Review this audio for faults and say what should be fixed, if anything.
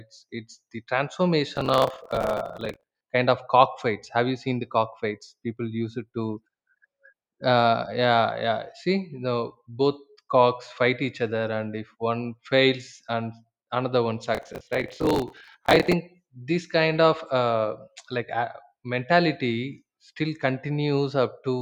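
Processor overload crackle appears twice in this speech, from 1.56 to 3.01 s and from 14.35 to 15.93 s. In each burst the processor repeatedly misses its deadline for short buffers of around 10 ms, and each miss is filled with stale audio whose hard edges click. Dozens of misses in a row fuse into a gritty crackle over the speech. Reduce concurrent processing load or increase the buffer size during recording.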